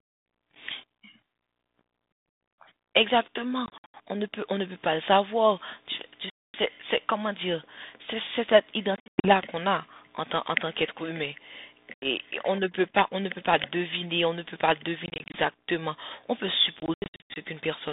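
Packet loss on an ADPCM call breaks the speech six times: at 3.66 to 3.95 s, 6.30 to 6.56 s, 8.96 to 9.32 s, 11.94 to 12.06 s, 15.06 to 15.39 s and 16.80 to 17.36 s. Each time, packets go missing and are replaced by silence. The gaps are scattered clusters, mostly up to 80 to 100 ms, except 6.30 s, a single 240 ms hole, and 11.94 s, a single 80 ms hole. When audio resumes, the receiving decoder's prediction and step size no longer match the sender's, so the speech comes back with some roughness before settling. This happens over a narrow telephone band whose light grain fits 32 kbit/s G.726 ADPCM.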